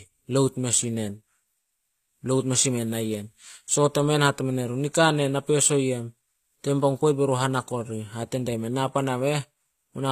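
Throughout the speech the treble sounds gritty and metallic, and s sounds come out lispy. This is likely HE-AAC compression at a low bitrate near 24 kbps, rebuilding the upper band from copied lower bands. A spectrogram shows nothing above 14.9 kHz.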